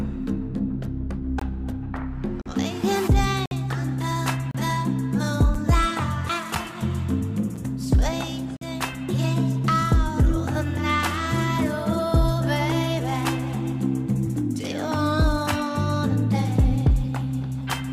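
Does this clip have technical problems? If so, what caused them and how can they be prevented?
Yes. There are gaps between stream segments. Hard-edged silent holes of 6 to 56 ms fall at 1.39, 2.42, 3.46, 4.51, 5.55, 6.55, 7.56 and 8.57 s. They recur at each 1 s segment boundary, where time stamps leave a gap. No audio is lost. Keep segment time stamps contiguous.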